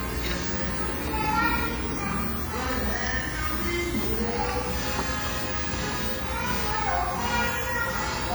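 From start to finish, a steady, even hiss sits only about 10 dB below the sound, loud enough to compete with it, yet without any grainy or harsh distortion on top. That is low bit depth with dither. The signal has been rounded to very few levels, which points to roughly 5 bits, and dither added before the rounding turns what would be gritty distortion into smooth white noise that never changes.

Running under that hiss across the whole clip is a second, heavy fault: a ringing, washy quality, with detail smeared over tens of milliseconds and quieter components simply missing. The likely cause is WMA compression from an early Windows Media Audio encoder, at a rate that fits about 32 kbps. Its long transform blocks spread quantisation noise around each event, and at that rate weak spectral lines are discarded, even though content still reaches up to about 20.1 kHz.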